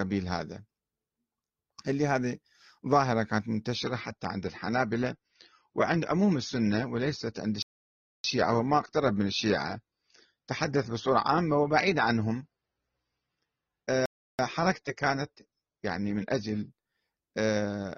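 At 3.75 s the speech abruptly turns lower in quality, with more codec artefacts, until 16.7 s. This adaptive stream at a lower bitrate suggests a drop to roughly 24 kbit/s. At 7.62 s the sound cuts out for 0.62 s, and at 14.06 s for 0.33 s. Each playback stall was likely the player running short of data.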